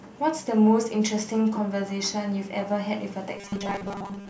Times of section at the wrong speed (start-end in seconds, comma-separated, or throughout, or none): none